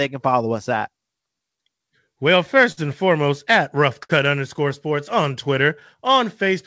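Throughout the speech runs clock drift between sender and receiver: the sender's clock is roughly 5% slow, so the jitter buffer keeps draining, unlike random network loss with no steady direction. From 0.09 to 6.45 s, repeated timing corrections stretch the audio to 98% speed by repeating short pieces, adding around 150 ms overall. This is heard as an unevenly dragging tempo rather than distinct dropouts. Between 1.57 and 2.79 s come scattered short gaps: about four lost or late packets, the longest around 50 ms, each patched by continuing the last sound. They give brief ticks or smears, isolated rather than part of the steady drift. From 4.03 to 4.11 s, a short stall from a late packet holds one sound for 62 ms until the packet arrives. Nothing is skipped, so it sounds like a single drawn-out sound rather than a gap. The call path's G.722 coding at 64 kbps leaves nothing above 8 kHz.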